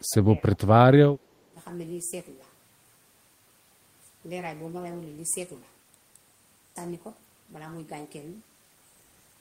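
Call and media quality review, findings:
Speech suppressed in double talk, likely echo canceller mistaking near-end talk for loudspeaker echo. Speech ducked about 20 dB at 0.00–0.44 s, about 15 dB at 1.50–1.58 s.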